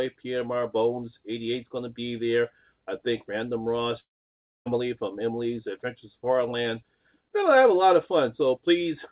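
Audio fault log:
4.0–4.68 s, long network dropout: the sound dissolves into a fading buzz, then near-silence for most of the 0.66 s. It resumes with that stretch missing, likely from lost packets. The spectrogram shows a smeared decay, then a blank column, all below 4 kHz.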